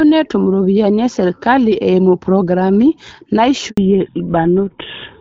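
At 3.70 s the speech cuts to silence for 80 ms until 3.78 s. This handover gap happened when the call switched networks and no speech frames arrived. From 3.78 s to the end, the speech loses everything above 4 kHz and sounds duller and rougher than the light-damage HD Voice before it. That points to a fallback to narrowband, from AMR wideband to an older codec such as GSM full rate.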